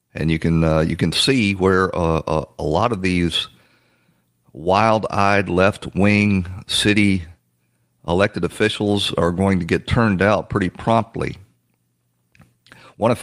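No technical faults are audible.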